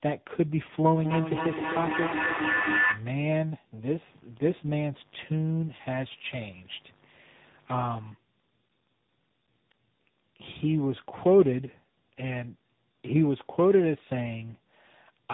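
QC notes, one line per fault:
throughout: tandem speech coding. The speech was decoded and re-encoded through three speech codecs in a row, each working on the previous one's damaged output. The errors stack up, leaving the speech rough, muffled and warbly, with nothing above 3.8 kHz, which fits a final narrowband stage such as AMR-NB.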